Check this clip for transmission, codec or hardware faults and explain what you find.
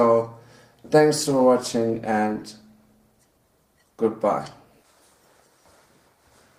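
One transmission fault is present: a call bitrate drop from 1.24 s to the end of the clip. The call's bandwidth estimate fell and the encoder was forced to work with far fewer bits, which fits a fall from about 128 kbps to roughly 18 kbps. The sound becomes coarser, rough and watery, and loses its high-frequency content, turning muffled. The lowest rate holds for about 2.2 s, and the quality does not recover before the clip ends.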